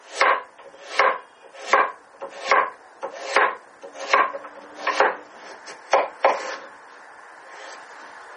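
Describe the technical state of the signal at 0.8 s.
At 0.8 s, as across the whole recording, this is low-bitrate audio saved at a high bitrate. An MP3 encode at something like 32 kbit/s was likely re-encoded as a much larger MP3, and the second pass cannot restore what the first discarded. Nothing is present above about 9.9 kHz, so the sound lacks air and sharpness, and the grainy, smeared texture of the first encode is still audible.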